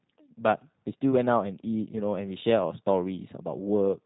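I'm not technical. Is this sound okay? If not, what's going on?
No, not quite. The whole clip of speech has been squeezed through a G.729 codec, the kind of compression used for internet phone calls. It rebuilds the talking from a rough model of the mouth and throat plus a handful of pulses, instead of keeping the real waveform. That's why it sounds a bit rough and synthetic from start to finish. Everything above about 3.8 kHz is gone too, so it's muffled like a phone line.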